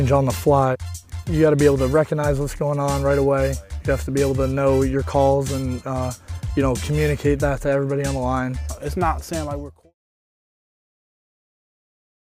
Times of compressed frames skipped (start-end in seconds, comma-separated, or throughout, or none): none